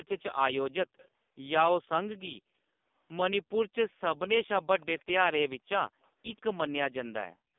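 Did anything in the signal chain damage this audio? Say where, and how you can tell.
Yes. At the codec stage the whole clip carries AMR narrowband mobile codec damage, and it is heavy. The speech sounds buzzy and synthetic, boxed into a line band of roughly 200 Hz to 3.6 kHz with nothing above 3.6 kHz. At a low mode of 5.15 kbps, the codec rebuilds the voice from a vocal-tract model fed by very few pulses per 5 ms. That coarse excitation is what gives the voice its mechanical, reedy texture.

In the call processing, a brief echo leak shows up from 0.97 to 1.08 s. It is a faint, delayed copy of the speech trailing about 136 ms behind, far below the main voice, roughly 25 dB down. The likely cause is a far-end loudspeaker whose echo canceller failed to subtract all of what its microphone picked up. The residue went back down the line as a short scrap.

Also in the call processing, the room sound is gated by the echo canceller from 7.26 to 7.56 s. 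The background falls away abruptly, sinking by as much as about 40 dB for roughly 300 ms, and then returns. The canceller judged the loudspeaker active and clamped the microphone hard, so the ambience dropped out until it released. The high-pass in the call microphone processing only trims the lowest bass, which is expected and not part of the damage.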